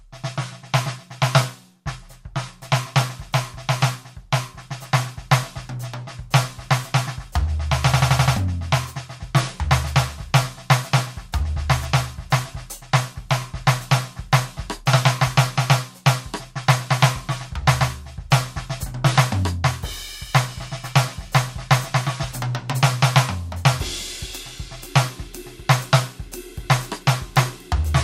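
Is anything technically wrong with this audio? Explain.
Yes. A system hang loop occurs from 7.94 to 8.36 s: the playback system froze while the hardware kept replaying one ring buffer, consistent with a 4096-sample buffer. An 85 ms slice of the music repeats five times at 11.7 Hz, a stuttering machine-gun effect replacing roughly 0.4 s of audio.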